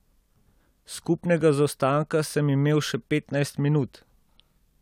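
Nothing in the speech stood out as a technical fault on listening.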